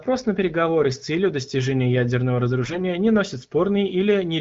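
From 2.64 to 2.81 s, after "с целью достижения ядерного" and before "не носит", AMR bit errors hit: roughly 7% of weakly protected bits flipped, making the AMR-WB speech briefly hoarse and gargly.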